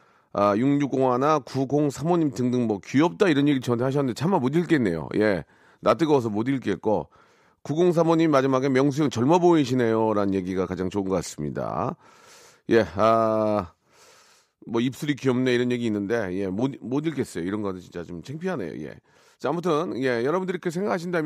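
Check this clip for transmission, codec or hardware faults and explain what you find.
Nothing stood out on listening to this speech recording; no transmission, codec or hardware problem could be heard anywhere in it.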